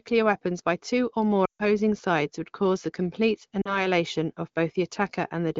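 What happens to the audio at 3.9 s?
Lost AMR speech frames from 3.61 to 3.87 s made the decoder repeat and fade its last good settings, so just after, at 3.9 s, speech returns weak or rough.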